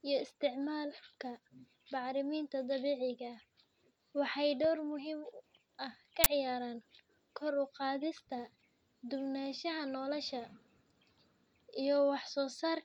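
A speech recording with an uninitialised buffer fault: at one point the playback chain sent out a block of memory before any audio had been written into it, so whatever leftover data sat there was read as samples. The result is a sudden, loud crack from 6.24 to 6.26 s, lasting 20 ms, which matches one whole block of garbage replacing the speech rather than a dropout.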